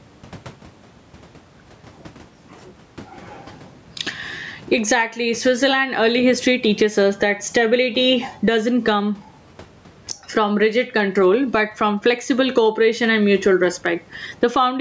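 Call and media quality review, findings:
Gain pumping, throughout: noise floor swells in gaps, ducks under loud sounds, about 15 dB swing. Likely excess input gain into a fast limiter. Spectrogram: background breathing; waveform: flattened envelope.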